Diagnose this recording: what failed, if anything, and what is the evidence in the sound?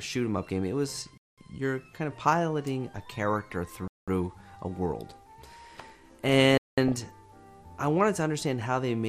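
Codec stage: the whole clip sounds dull and gurgly, with upper bands flickering out. That's likely MP2 compression, and the damage fits a low rate around 80 kbps.

Playback or buffering: there's a gap between chunks at 1.18, 3.88 and 6.58 s. Each is a 200 ms hole, landing after every 2.5 s chunk.

Transmission: DAB burbling at 3.34–3.52 s and 6.88–7.02 s, with short noise blips in single sub-bands where weak-reception bit errors got past error correction into the MP2 frames.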